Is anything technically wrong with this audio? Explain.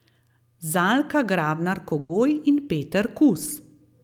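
Yes. At 1.99 to 2.11 s there is a burst of packet loss in this speech. About 100 ms of audio never arrived in time. The receiver stretched the last sound to fill the gap and faded it as the gap went on. It is heard as a brief held buzz or hiss. Then the speech jumps ahead, and that stretch of speech is missing.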